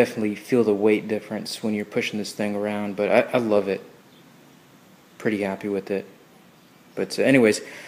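No technical faults occur at any point in the audio, so there is nothing to describe in time order.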